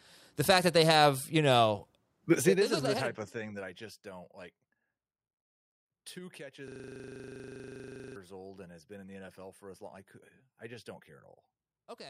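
From 6.68 to 8.16 s, a system hang loop repeats one 40 ms slice dozens of times, producing a steady 25 Hz buzz before "old and has been". About one and a half seconds of audio is lost. The waveform shows identical repeating blocks, and the spectrogram shows evenly spaced vertical stripes.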